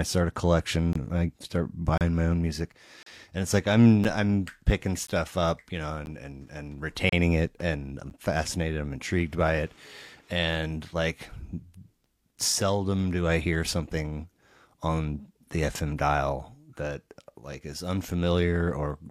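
In this speech clip, gaps between stream segments leave the timestamps of consecutive one-second segments slightly apart, so the player inserts hard-edged silences of about 9 to 34 ms at 0.93–0.96, 1.98–2.01 (after "I start"), 3.03–3.06, 4.04, 5.07, 6.06, 7.09–7.13 and 8.1 s.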